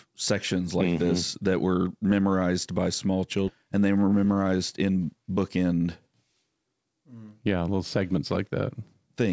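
A speech clip heard over a call path that carries nothing above 8 kHz. At 3.48 s, just after "were memorized by small", there is a skip ahead. About 0.7 s of speech is dropped and the two sides join with no gap. From 3.64 to 5.57 s comes a jitter buffer speed-up. Speech runs about 13% fast at unchanged pitch and sounds hurried. Short pitch-period pieces were cut repeatedly, removing roughly a third of a second to shrink the buffered delay.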